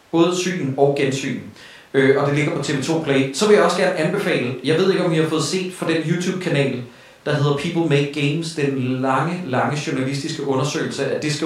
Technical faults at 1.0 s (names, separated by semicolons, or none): none